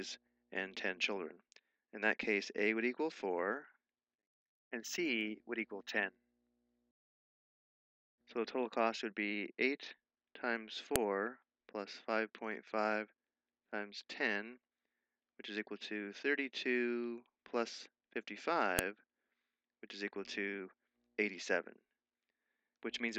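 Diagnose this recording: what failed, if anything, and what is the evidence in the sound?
The failure is at the storage or concatenation stage: a file header is being played as audio. Two sharp, loud clicks stand out at 10.96 s and 18.79 s, each a single brief snap that cuts across whatever the sound is doing. This fits separate WAV segments being joined or streamed with their headers left in place, so the few dozen bytes of header metadata at each segment boundary are decoded as sample values.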